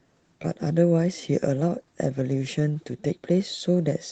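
A speech recording suffers clock drift between sender and receiver: the sending clock runs roughly 4% slow, so the receiver's jitter buffer keeps draining and must stretch the audio to keep playing. That stretching shows up as repeated timing corrections from 0.04 s to 4.0 s. Short pieces are repeated at uneven intervals, always lengthening rather than shortening, and the delivery plays at about 96% speed with something like 150 ms added overall. The one-directional pattern of these edits is what sets this apart from packet loss. Loss produces isolated concealment artefacts or brief gaps at random, whereas here every edit pushes the same way and the repeats continue steadily through the stretch instead of clustering around a bad moment. The audio passed through an Opus call path, and its top end stops around 8 kHz, which fits a wideband setting near 24 kbps.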